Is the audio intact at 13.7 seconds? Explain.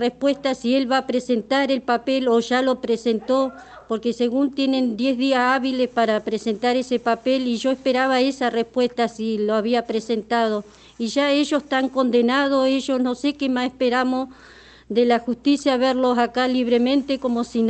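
Yes, the audio at 13.7 seconds is intact, with only the ordinary coding character of the call path and its high-frequency limit around 8 kHz audible there.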